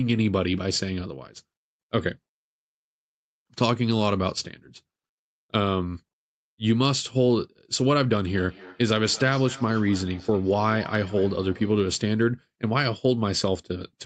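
Speech over a call, and from 8.27 to 12.03 s there's a feedback echo between two devices. The sound keeps coming back at roughly a fifth of a second, each pass thinner and more ringing, peaking at about 20 dB under the speech. Two devices in the same room are on the call, one playing out what the other's mic sent, and that mic picks it up again. Each echo canceller only removes its own playback, so the loop survives. The top end stops around 8 kHz, consistent with a wideband call codec.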